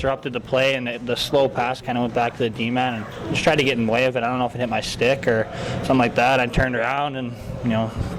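No technical faults can be heard anywhere here.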